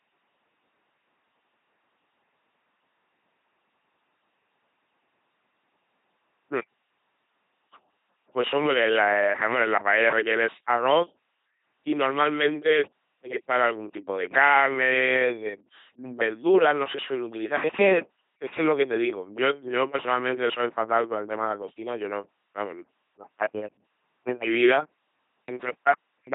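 The speech has been through an LPC-10 vocoder from start to finish. Each moment is rebuilt from a ten-pole vocal tract filter fed by either a pulse train or noise, with nothing above 3.8 kHz, which fits a 2.4 kbit/s LPC-10 stream. The result is a heavily buzzing, mechanical robot voice, with stray buzz or hiss wherever the voiced-or-unvoiced choice goes wrong.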